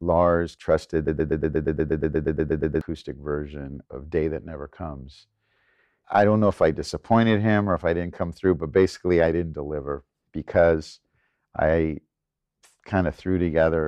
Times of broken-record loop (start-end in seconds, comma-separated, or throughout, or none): 1.08-2.81